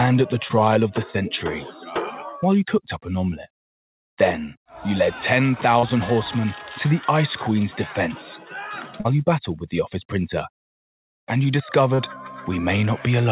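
At 0.48 to 0.51 s there is a short concealed packet loss. About 20 ms of audio failed to reach the decoder in time, and the receiver filled roughly 12 ms of it by extending the preceding sound before crossfading back into the real signal. The result is a brief smear rather than a clean dropout.

From 1.72 to 1.87 s, a span of roughly 150 ms, a sound was cut by the noise suppressor. The suppressor classified it as noise and attenuated it harder than its surroundings, pulling the level down by about 7 dB at the deepest point. It sinks in level rather than disappearing.

Three more concealed packet losses follow, each around 40 ms long: 5.79 to 5.85 s, 9.01 to 9.07 s, and 11.95 to 12.00 s. In the first, about 34 ms was synthesized. In the other two, nearly the whole 40 ms gap was filled from the prior sound's pitch or noise shape.

Throughout, nothing is heard above 4 kHz, consistent with G.711 mu-law at 64 kbps on the call path.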